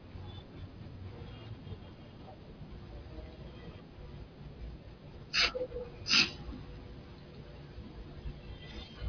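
No technical faults can be heard anywhere in the speech recording.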